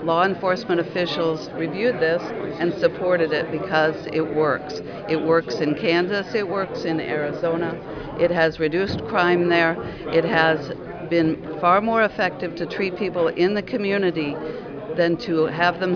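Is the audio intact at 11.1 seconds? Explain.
Yes, at 11.1 seconds the audio is intact, with no dropout, click, distortion or other fault at that moment.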